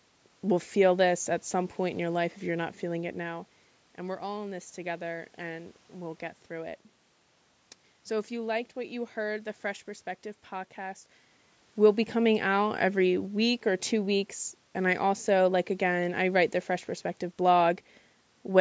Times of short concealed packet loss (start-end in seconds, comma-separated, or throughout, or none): none